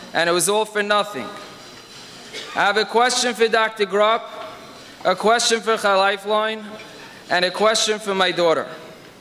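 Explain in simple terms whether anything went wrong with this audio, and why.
Listening closely, nothing stood out as having gone wrong with this audio.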